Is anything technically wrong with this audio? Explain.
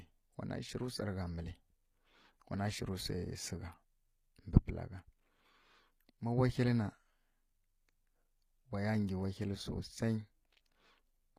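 Yes. Throughout the speech, the audio was likely passed through HE-AAC compression at a low bitrate, with a character that fits something around 24 kbps. The codec keeps only the lower spectrum and synthesises the treble by copying lower bands upward under a coarse envelope. The top end still reaches high, but its harmonics don't line up with those below, so s sounds come out gritty, metallic and lispy, and the damage is plainly audible.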